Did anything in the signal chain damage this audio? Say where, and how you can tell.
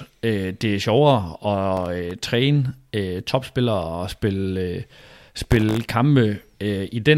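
Yes, at the driver or buffer stage: processor overload crackle from 1.77 to 2.11 s and, denser, from 5.44 to 5.94 s. Sub-millisecond buffers missed their deadlines and went silent, leaving clustered hard-edged gaps heard as grit, unlike network loss's longer, smoothed dropouts.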